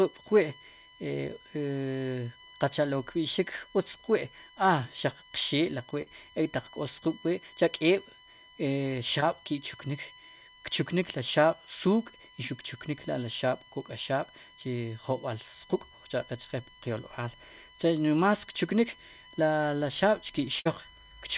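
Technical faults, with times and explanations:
Throughout: USB whine. Current drawn by the USB bus in 1 ms frames is leaking into the audio through the power or ground, so a steady tone at 1 kHz sits under the speech along with its multiples. It is loudest at 3 kHz, about 30 dB below the speech, and its pitch never drifts.
6.02 to 6.08 s and 9.20 to 9.24 s: short concealed packet loss. Audio failed to reach the decoder in time, about 40 ms at 6.02 s and about 20 ms at 9.20 s. The receiver covered each hole by extending the preceding sound, for about 43 ms and 14 ms respectively, before blending back into real audio. The result is a brief smear or wobble, with a short stretch of the original lost.
20.60 to 20.67 s: burst of packet loss. About 60 ms of consecutive audio was lost or arrived too late to play. The receiver kept extending the last sound for about 56 ms while turning it down, so the speech turns into a held, fading buzz or hiss. 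It then jumps ahead, and the material from that gap is simply gone.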